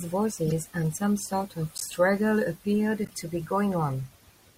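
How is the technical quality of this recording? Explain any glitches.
The speech has three short glitches. Corrupt frame decoded at 0.46–0.52 s, 1.77–1.85 s and 3.05–3.14 s: damaged bits in a few compressed frames were decoded anyway, misplacing energy into brief chirp-like noise bursts, loudest at 1.77 s.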